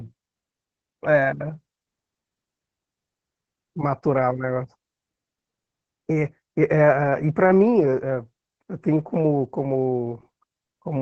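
Throughout, the speech is squeezed by Opus voice compression running its SILK linear-prediction coder at a starved rate, which fits about 10 kbps. Nothing above 8 kHz survives, and the coarsely coded excitation leaves the speech heavily muffled, hoarse and faintly robotic.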